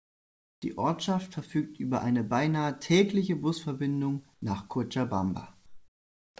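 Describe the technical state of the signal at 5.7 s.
At 5.7 s the background has been swapped for comfort noise, running from about 5.66 to 6.36 s (0.7 s). The real room sound gives way to a steady, featureless hiss about 12 dB quieter, likely because the sender's voice detector paused transmission and the receiver synthesised filler noise. Unlike a noise gate or dropout, the level never falls to silence; the texture simply goes flat. Like the rest of the G.722 audio, the filler carries nothing above 8 kHz.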